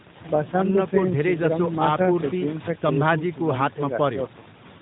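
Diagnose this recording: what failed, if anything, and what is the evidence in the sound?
Nothing failed in this recording, so there is no fault to diagnose and no evidence of one in the sound.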